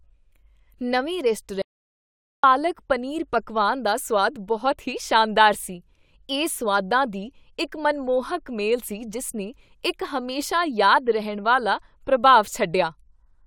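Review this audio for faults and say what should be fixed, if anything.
From 1.62 s to 2.43 s the speech stops dead, and for about 0.82 s there is silence, with no room tone or hiss underneath, before it resumes mid-flow at "ਪਨੀਰ ਪਕਵਾਨ ਦਾ ਸੁਆਦ". This is an audio dropout to silence: whatever was said in that gap is simply missing. The likely cause is the input signal being lost briefly, through a loose connection, a link failure or an accidental mute, while the recorder kept writing silence. To prevent it, secure cables and wireless links, check mute controls, and monitor the input live during recording.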